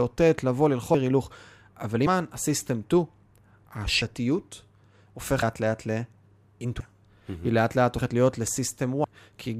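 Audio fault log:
0.94, 2.06, 4.02, 5.42, 6.80, 7.98 and 9.04 s: compressed frames skipped. At each point the speech jumps ahead by roughly 0.15 to 0.4 s, some five to ten frames consistent with a 32 ms frame length, missing or rejected by the decoder.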